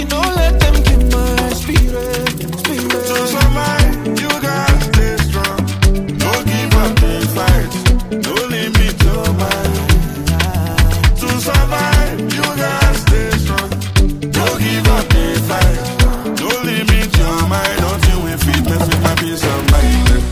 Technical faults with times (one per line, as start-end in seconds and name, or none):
none